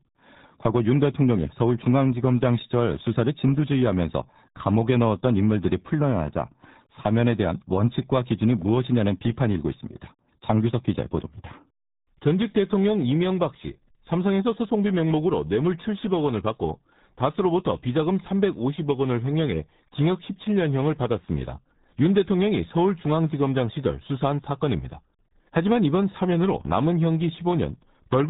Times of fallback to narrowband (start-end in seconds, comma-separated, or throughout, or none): none